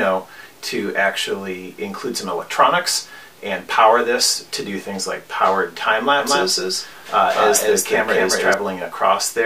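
From 6.20 to 8.54 s a doubled audio track appears: a full-band copy follows roughly 200 ms behind, somewhat quieter, likely from a second, slower capture path. On the waveform and spectrogram every onset shows a sharp-edged twin, starting and stopping abruptly.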